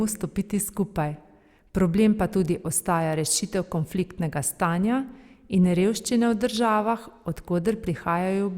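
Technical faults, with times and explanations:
No technical faults detected.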